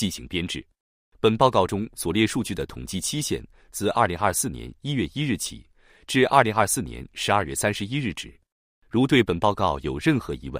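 No technical faults are audible anywhere in the clip.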